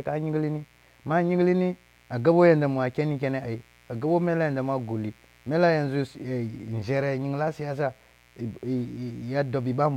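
From start to finish, sharp switching spikes from the 60 Hz mains supply leak into the signal path, twice per cycle, adding harmonics that climb into the kilohertz range. The result is mains buzz, a steady, raspy drone sitting roughly 35 dB below the speech.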